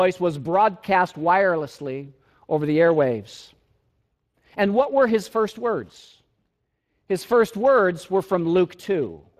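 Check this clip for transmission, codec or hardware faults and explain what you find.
One codec fault runs through the whole recording. From start to finish the speech sounds grainy and hoarse, with nothing above 15.3 kHz. That is Speex codec damage: the CELP coder is starved of excitation bits, consistent with roughly 22 kbps.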